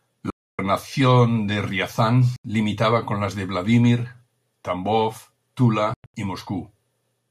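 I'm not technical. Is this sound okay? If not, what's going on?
No. The speech drops to sudden silence at 0.30–0.59 s, 2.36–2.45 s (just before "limitaba con las de") and in patches at 5.94–6.14 s, likely a Bluetooth dropout. Unlike a stutter, it resumes further along, skipping what was lost.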